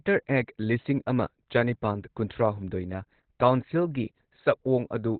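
From start to finish the speech is band-limited, with nothing above 4.4 kHz, and it sounds muffled and hoarse with heavy codec damage. The likely cause is Opus compression in its narrowband speech (SILK) mode, at a rate that fits roughly 12 kbps. Unlike MP3 at low rates, there is no swirling or watery warble from spectral holes. Unlike a plain low-pass filter, the remaining band is itself coarse and rough-textured, not clean.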